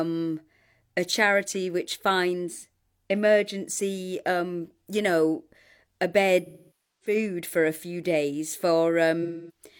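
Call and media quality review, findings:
AAC frame loss with concealment, 6.46–7.16 s and 9.22–9.62 s: sound smears, then decays toward silence and fades back in. Decoder is rebuilding from the last good spectrum. Losses fit about 0.55 s and 0.26 s of frames. Spectrogram: blurred, decaying band. Waveform: envelope tapering.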